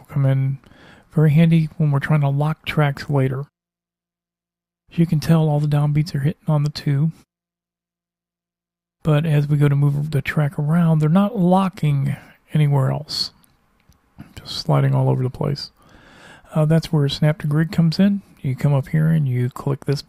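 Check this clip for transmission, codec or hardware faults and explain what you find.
No faults turned up when I checked this clip, so there is nothing to explain.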